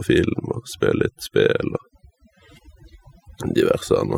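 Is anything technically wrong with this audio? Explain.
Yes, there's overdone noise removal running through the whole clip. Someone pushed the noise reduction too hard, so any frequency band sitting close to the tool's idea of the noise floor gets pulled way down or shut off, and the quieter parts of the speech get caught too. You hear it as a background that drops away and breaks up into little twinkling specks.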